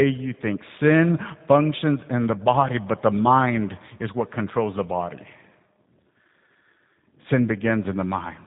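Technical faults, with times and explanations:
Throughout, G.729 codec: the speech is cut off above about 3.8 kHz and sounds rough and slightly synthetic, which fits 8 kbit/s G.729A rebuilding each frame from a filter and a few pulses. That synthetic texture distinguishes it from simple band-limiting.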